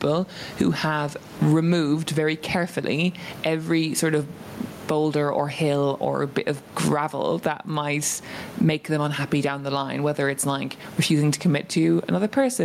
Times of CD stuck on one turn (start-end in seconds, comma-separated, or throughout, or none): none